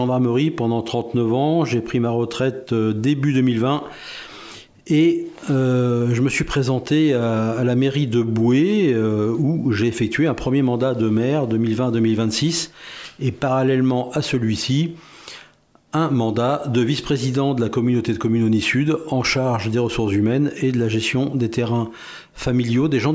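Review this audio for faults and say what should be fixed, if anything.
Nothing needs fixing: the signal is continuous and intact throughout, with no level, timing or transmission problems to correct.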